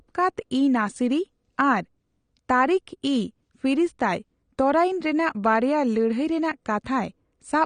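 From start to finish, the speech carries plainly audible coding damage, likely from AAC compression. Nothing sounds above 9.7 kHz. The top of the spectrum is simply gone, so the sound is dull. The encoder has too few bits to spend. It drops fine frequency detail and leaves gaps between bands. This fits a low bitrate of around 32 kbps. Sibilants turn fizzy, and sustained sounds warble and smear.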